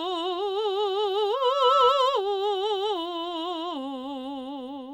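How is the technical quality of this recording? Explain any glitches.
The recording has one clear fault in the music. From 1.33 to 2.22 s, a piercing 1.3 kHz tone swells over roughly 0.4 s to about 10 dB above the music: loudspeaker feedback squeal, where the microphone re-amplified its own loudspeaker at that frequency.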